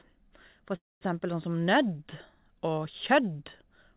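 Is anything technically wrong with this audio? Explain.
Yes. From 0.76 to 1.03 s the speech gives way to a fading buzz, then silence, before resuming intact. This is a call audio freeze, likely caused by delayed packets emptying the jitter buffer.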